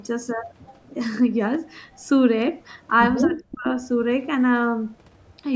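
From 0.63 to 0.91 s there is an echo leak. A faint, delayed copy of the speech comes back, roughly 250 ms late and about 30 dB below it. The far side's echo canceller likely let part of its loudspeaker sound through.

From 3.25 to 3.66 s the speech is suppressed in double talk. The voice sinks sharply, by roughly 40 dB at its deepest, for about 400 ms. An echo canceller likely mistook overlapping talk for echo and turned it down.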